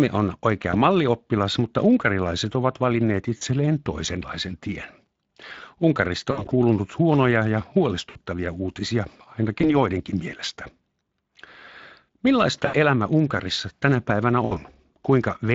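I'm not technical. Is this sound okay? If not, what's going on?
No, it isn't quite right. The whole clip carries the sound of the Speex codec, an older internet-call speech compressor squeezing the audio hard. It strips detail, so the speech sounds noticeably hoarse and grainy, and the crisp top end is replaced by a hazy hiss rather than real detail. That roughness runs from start to finish, not just in spots.

On top of that there are seven dropouts: VoIP packet loss concealed by the speech codec. Little chunks of the call went missing, and the decoder papered over each gap by guessing from the last sound it had, stretching it into a brief buzzy or smeared tone that fades. They land at about 0.71, 3.37, 6.31 to 6.54, 8.09, 9.61, 12.65 and 14.45 seconds. The one around 6.3 seconds is the messiest, several small losses bunched together, and speech can stay a bit weak or warped for a moment after each gap.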